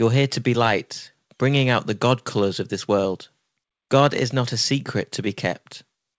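A speech clip with clock drift between sender and receiver: the sender's clock runs slow, roughly one and a half percent, so the receiver's jitter buffer keeps draining. That shows up as repeated timing corrections from 0.22 to 5.49 s, where the receiver keeps repeating tiny slices to fill the gap, stretching things by something like 70 ms overall. You hear it as a faintly dragging, slightly uneven pace, about 99% speed, with the odd small hiccup. The call codec path cuts everything above 8 kHz, which fits wideband G.722.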